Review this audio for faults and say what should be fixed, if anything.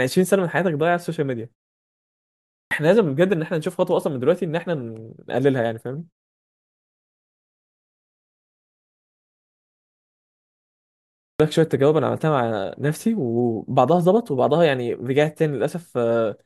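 Two clipped starts after a pause occur. At 2.36 s, after a 0.89 s gap, speech resumes abruptly with about 351 ms swallowed, through 2.71 s. At 11.01 s, after a 4.97 s gap, about 387 ms is lost, through 11.40 s. The output device drops into a sleep state during silence and needs this long to wake and resynchronise, so the first sounds of each phrase never reach the output. To prevent it, keep the output stream active through silences or disable the device's idle power-saving.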